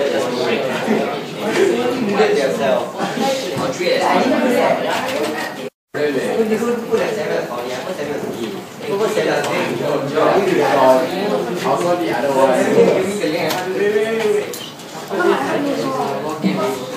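At 5.68 s the player was likely starved of data or had its output thread blocked, so nothing reached the output until it recovered at 5.95 s. This playback stall leaves a gap of about 255 ms of dead silence. The sound breaks off abruptly in mid-flow rather than fading, and after roughly a quarter of a second it picks up again just as suddenly, giving a clear hiccup in the continuity of the audio.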